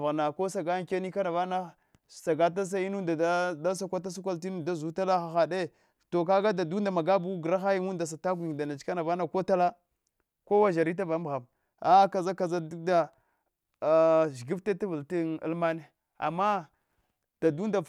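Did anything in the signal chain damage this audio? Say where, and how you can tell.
No, no signal-chain damage detected.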